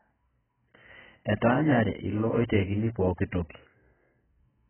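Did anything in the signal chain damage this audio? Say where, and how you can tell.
Yes. Throughout the speech the codec stage has left AAC compression damage, likely from AAC-LC: nothing sounds above 3.1 kHz, and what remains is smeared and warbly, which fits a bitrate near 10 kbps. A plain low-pass filter would dull without that swirling, patchy texture.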